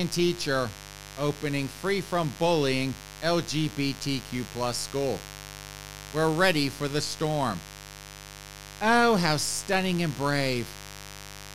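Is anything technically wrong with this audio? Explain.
Yes. Mains buzz runs throughout the speech, fed by sharp switching spikes from something like a dimmer, rectifier or unshielded cable, twice per 50 Hz cycle. Its harmonics climb into the kilohertz range, giving a steady, raspy buzz sitting about 15 dB below the speech.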